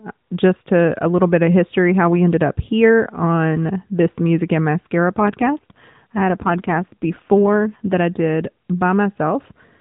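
From 5.10 to 7.94 s, just before "I did", an AMR rate drop makes the speech rougher and more synthetic. This fits the network lowering the AMR narrowband codec from 12.2 to 5.9 kbps. On a spectrogram the band stays under 4 kHz, and the waveform shows no gap.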